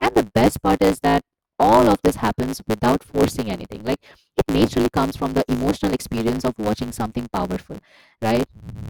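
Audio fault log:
Throughout: block size mismatch (truncated). Block ends are dropped, causing a 109 Hz buzz. Speech runs 1.16 times fast with its timbre kept, which fits 512-sample blocks.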